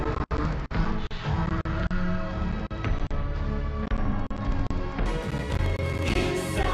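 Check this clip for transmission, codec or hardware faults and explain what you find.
A stereo stream was decoded as mono from 0.0 to 5.06 s, reading interleaved left and right samples in sequence as one channel. Each frame then lasts twice as long, so the sound plays at 0.5 speed, an octave (12 semitones) low.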